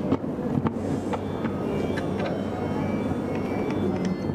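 No technical faults are audible.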